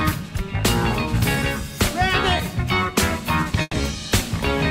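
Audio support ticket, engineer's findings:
Short concealed packet loss, 2.37–2.41 s: brief smear/wobble, about 20 ms missing. Jitter buffer/decoder PLC. Packet arrived late or not at all; receiver extrapolated the preceding sound across the hole, then crossfaded back into real audio.

Burst of packet loss, 3.61–3.75 s: held buzz or fading hiss, then a silent stretch of about 20 ms. Network path, receiver PLC. About 120 ms of packets were lost consecutively. Concealment continued and attenuated the last sound before muting. Playback resumes further on, with the intervening material gone.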